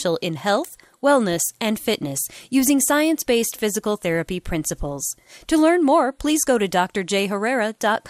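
Throughout, the speech sounds dull and gurgling, likely from MP2 compression at a low bitrate near 80 kbps; a spectrogram shows upper sub-bands blinking on and off.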